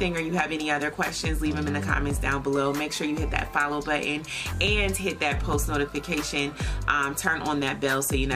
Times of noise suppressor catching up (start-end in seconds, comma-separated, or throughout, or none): none